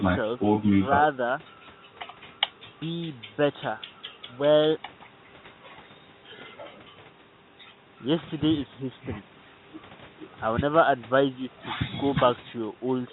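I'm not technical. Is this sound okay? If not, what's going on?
Yes, no faults heard.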